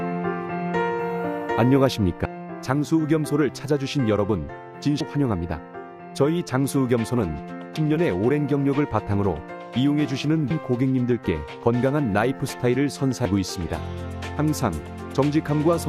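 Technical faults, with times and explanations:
2.25, 5.0, 7.75 and 10.5 s, audio missing between chunks: the sound skips forward every 2.75 s, losing roughly 0.3 s at each join, likely from 3-second chunks joined without their boundary audio. The waveform shows abrupt discontinuities; the spectrogram shows thin vertical broadband lines.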